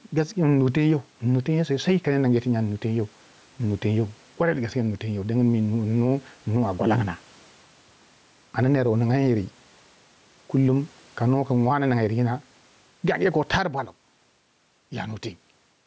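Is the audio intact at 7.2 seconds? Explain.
No. Gain pumping runs throughout, including 7.2 seconds: gain likely set too high drives a fast limiter to duck each loud sound around 10 dB, squashing loud and soft parts closer in level.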